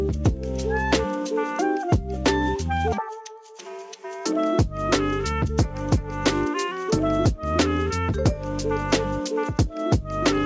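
Nothing stood out on listening, and the sound simply carries the ordinary shaping of call microphone processing, with the lowest bass trimmed and nothing above 8 kHz.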